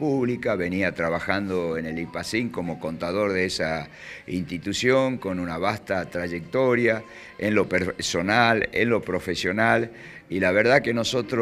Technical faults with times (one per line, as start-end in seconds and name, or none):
none